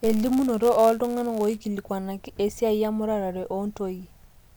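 Speech with a block size mismatch (padded) from 0 to 1.58 s: zero-filled gaps buzz at 99.6 Hz and slow delivery to 0.996× without the pitch drop a clock mismatch causes.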